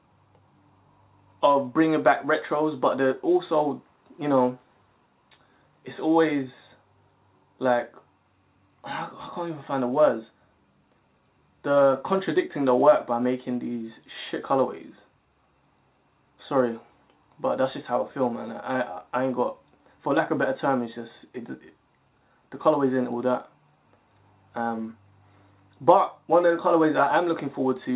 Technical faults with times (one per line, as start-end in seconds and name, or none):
none